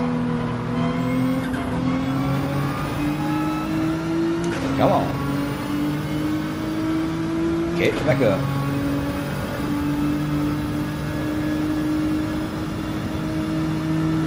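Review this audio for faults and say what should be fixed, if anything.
At 8.11 s the audio jumps forward: compressed frames skipped. Roughly 70 ms of material never plays, which fits about two whole frames of 32 ms each being lost from the stream or discarded by the decoder as corrupt. To prevent it, check file integrity after encoding and transfer, and re-encode or re-fetch any stream that fails checksums.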